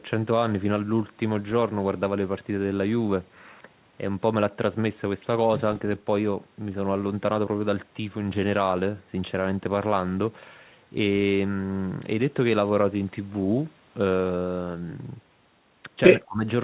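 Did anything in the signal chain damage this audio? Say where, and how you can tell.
Yes, in the call processing, right at the end. From 16.25 to 16.43 s the speech sinks by roughly 20 dB for about a fifth of a second. This is likely speech suppressed in double talk. The echo canceller mistook overlapping sound for echo and ducked it.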